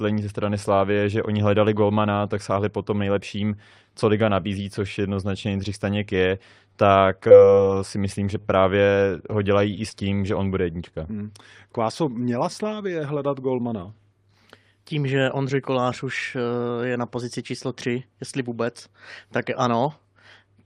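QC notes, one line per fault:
6.72–9.93 s scattered short gaps: about seven lost packets, longest roughly 40 ms, each patched by continuing the preceding sound, leaving brief ticks and smears before "tím že on bude".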